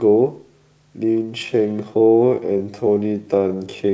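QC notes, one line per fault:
1.0–3.9 s, time-stretched section: from 1.0 s to the end the speech abruptly slows to about 0.69 times its pace at the same pitch, so it drags. The likely cause is software lengthening the audio by repeating short pieces so the pitch holds.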